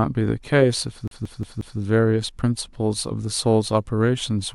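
At 1.08 s the speech catches like a CD stuck on one turn. A scratch keeps bouncing the laser back, so one 0.18 s slice plays four times until 1.79 s, with a brief mute at each jump. The waveform shows identical blocks split by thin gaps.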